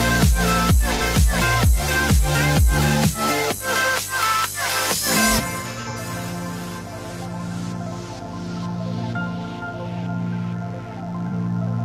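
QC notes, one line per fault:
Throughout: mains buzz. A steady, raspy buzz sits under the sound at about 20 dB below the signal. Sharp switching spikes, twice per 50 Hz cycle, have leaked in from a dimmer, rectifier or unshielded path, spreading harmonics of 50 Hz up into the kilohertz range.
0.95–1.01 s, 5.60–5.96 s, 11.27–11.32 s: AAC frame loss with concealment. The decoder patched missing frames from the last good spectrum, giving brief smeared, phasey patches. The first and last gaps each fit one lost frame of about 43 ms. The middle stretch is several short losses scattered over about a third of a second.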